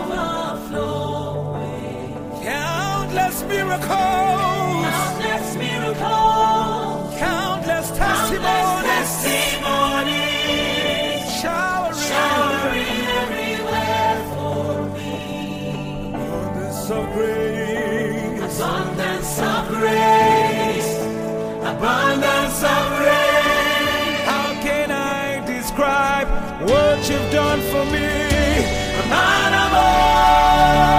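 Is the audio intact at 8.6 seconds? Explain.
Yes, the audio is intact at 8.6 seconds, with no dropout, click, distortion or other technical fault at that point.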